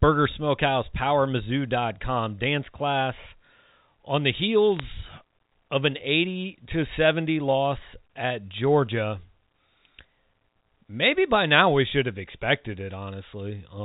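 At 4.76 to 4.80 s, just after "on the", a short burst of crackle sits on top of otherwise unaltered speech. These are bit errors on a digital phone line. The error rate is around one bit in a thousand, spread over what sounds like a handful of frames. Each flipped bit corrupts a single G.711 mu-law sample, and a hit on a high-order bit, or on the sign of a loud sample, throws it far from its true value. On a waveform these show as isolated one-sample spikes. On a spectrogram they show as thin vertical lines running up to the 4 kHz ceiling of the telephone band.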